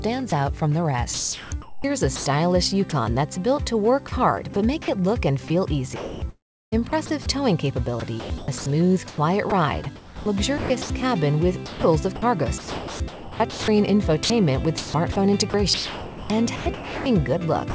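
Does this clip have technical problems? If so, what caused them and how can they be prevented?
Yes. At 0.30 to 0.32 s there is a brief sound dropped by the voice detector. About 20 ms gives way to steady synthetic noise, and roughly 10 ms of real sound is lost. The likely cause is the sender's voice detector judging a quiet sound as background and stopping transmission. The receiver filled the gap with comfort noise. Lowering the detector's sensitivity threshold or adding a longer hangover time would prevent this.

The clip also has sound chopped by the voice detector in three stretches. These are 1.14 to 2.92 s, 4.08 to 4.56 s, and 5.48 s to the end. In each, the sound breaks up repeatedly. The replaced time is 720 ms, then 60 ms, then 4.21 s. This is likely the detector toggling on and off around quieter passages, with comfort noise inserted each time. The G.722 call path, with nothing above 8 kHz, carries the rest. 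Disabling discontinuous transmission or raising the hangover would prevent the chopping.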